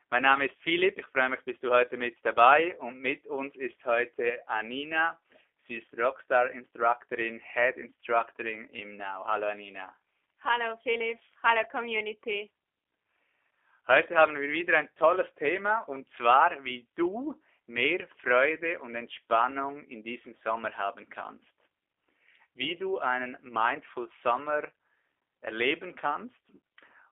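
From start to finish, the speech carries G.729 codec damage, and it is plainly audible. Nothing comes through below 300 Hz or above 3.5 kHz. The codec does not store the waveform. It rebuilds each short frame from a vocal tract filter, a pitch predictor and a few pulses. The result sounds rough, buzzy and slightly synthetic. The thin, boxy tone and coarse texture point to an 8 kbit/s stream, the G.729A variant.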